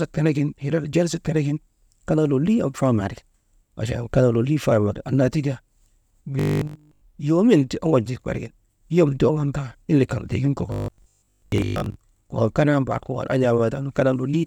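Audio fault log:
6.39–7.01 s and 10.72–11.96 s: robotic sound from repeated short buffers, a rigid 50 Hz metallic buzz, likely from a 20 ms chunk looping. Unlike mains hum, it follows the speech only roughly.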